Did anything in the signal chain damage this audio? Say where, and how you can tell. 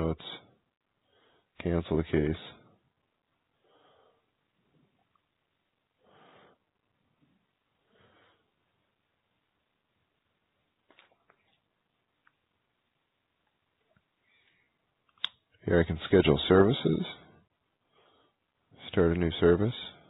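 Yes. The damage is in the network and jitter-buffer stage: clock drift between sender and receiver, with the sender's clock running roughly one and a half percent slow. The buffer keeps draining, so small timing hiccups turn up unevenly across the whole clip.

The repeated timing corrections run from 0.61 s to 19.70 s. The receiver keeps padding out short pieces to cover the slow sender, which plays things at about 98% speed and adds roughly 0.3 s overall.

The time-stretched section runs from 4.23 s to 6.55 s. The pace jumps to 1.46 times speed while the pitch holds, so it sounds rushed. That points to pitch-preserving time-compression, likely software squeezing the audio to fit a length. It sits alongside the G.711 call path's band limit at 4 kHz.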